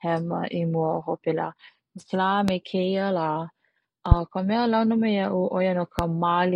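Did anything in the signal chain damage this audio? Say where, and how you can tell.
Yes. Three loud pops cut through the speech at 2.48–2.51 s, just before "me keia la", at 4.12–4.14 s, and at 5.99–6.02 s, right after "a launa me ia'u". Each is a single sharp click lasting about 26 ms and peaking roughly 20 dB above the speech, which carries on unbroken beneath it. That points to the analogue wiring stage, likely an intermittent connection or static discharge injecting brief voltage spikes that the following circuitry shapes into pops.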